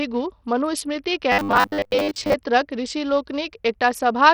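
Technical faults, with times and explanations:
Throughout: Bluetooth SBC compression, likely. Heavy gritty, flickering treble; spectrogram shows a hard ceiling and patchy top bands, fitting a 64 kbps stream.
1.32 to 2.34 s: robotic sound from repeated short buffers, likely. Most of it is looped 10 ms slices, forcing a rigid 100 Hz buzz; waveform shows identical repeating cycles.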